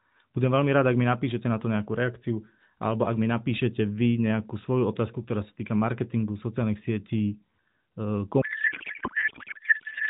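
Speech carried over AMR narrowband, band-limited at 4 kHz, with a light coding texture that fits the 12.2 kbps mode. From 8.42 s to the end, a codec payload misread replaces the speech with garbled warbling noise. Octet-aligned AMR frames are being parsed as bandwidth-efficient, so every field is misplaced. On a spectrogram the formants dissolve into smeared blotches, and the waveform loses its syllable envelope.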